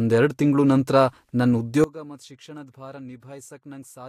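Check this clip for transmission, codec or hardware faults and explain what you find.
One fault is present: a sudden gain jump at 1.84 s, after which the speech stays about 20 dB quieter until the end of the clip. The level changes between one sample and the next, likely because a gain setting or bit shift was applied without any ramp. Speech and background noise drop together and stay down. That sets it apart from a fade, which glides over time, and from automatic gain control, which acts gradually and would leave the noise floor behaving differently from the speech.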